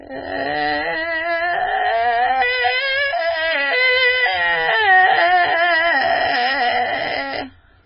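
Throughout the music, heavy MP3 compression damage is likely: nothing survives above 5.4 kHz, leaving a dull, watery sound with swirling, chirpy detail and smeared attacks, which fits a very low bitrate of about 16 kbps. A spectrogram shows a flat ceiling and flickering patches below it.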